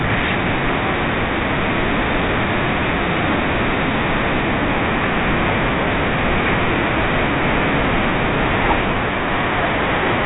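The speech comes through a G.726 ADPCM path at 32 kbit/s, the rate DECT cordless phones use, so nothing above 4 kHz passes and a light coding roughness rides on the signal, and no technical fault can be heard anywhere in it.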